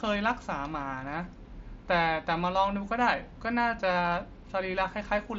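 No technical faults can be heard in this speech.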